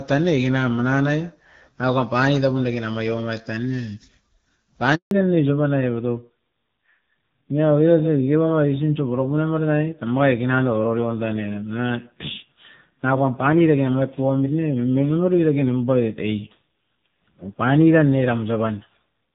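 A handover gap at 4.95 to 5.11 s cuts the speech for 160 ms: while the call switched networks, no frames arrived, so the voice dies away within a few tens of milliseconds and goes silent. A fallback to narrowband at 5.11 s follows. Everything above 4 kHz disappears for the rest of the clip, and the speech turns duller and rougher than the clear HD Voice before it. This fits a switch to a narrowband AMR codec at a low rate.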